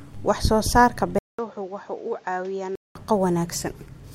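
At 1.19 s the speech drops out for about 200 ms, then comes back roughly 10 dB quieter, duller, with nothing above 7.6 kHz and fresh background noise well underneath, until 2.95 s. That's likely the input switched to a poorer device mid-recording.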